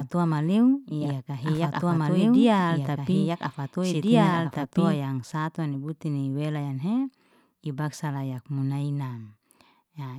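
Speech, with a doubled audio track from the start to 4.98 s, likely from a second, slower capture path: an equally loud, dry copy trails about a second and a half behind, then cuts out abruptly before "yang satu ni butuni".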